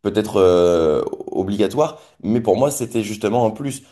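No technical faults can be heard anywhere in the clip, so there is nothing to describe in time order.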